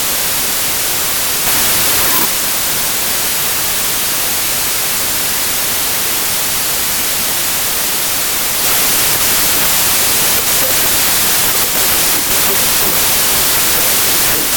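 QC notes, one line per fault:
Throughout, wrong sample width: loud, harsh broadband noise swamps the clip, with the speech buried underneath and running at about two-thirds speed, so it sounds slow and low in pitch. The pattern fits packed 24-bit data read as 16-bit. Each three-byte sample is split into one and a half 16-bit values, so many values mix bytes from adjacent samples and become noise. Only some keep the real signal's top bits, and the extra values stretch playback by a factor of 1.5.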